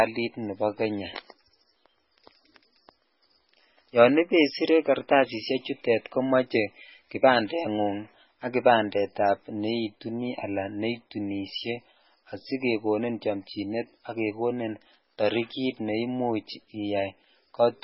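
Speech throughout with heavy MP3 compression damage: nothing above 5.6 kHz, watery, swirling artefacts on s sounds, and smeared attacks, which fits a very low bitrate near 16 kbps. The flickering, swirling detail distinguishes it from a plain low-pass filter, which would only dull the sound.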